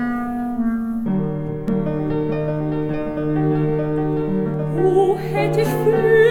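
This is a music clip with a doubled audio track from 1.68 s to 4.54 s. A second full-band copy of the music plays roughly 0.7 s behind the first, at about the same loudness. The copy has no decay or room colour, so it sounds like a clean repeat rather than an echo. It appears and cuts out abruptly. The likely cause is the signal being captured again through a slower path, or an edit holding two offset copies.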